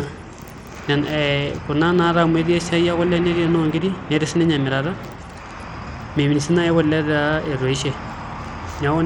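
Throughout, the speech's treble flickers and drops out under gritty noise: likely Bluetooth SBC compression starving its top sub-bands, fitting a bitrate near 96 kbps.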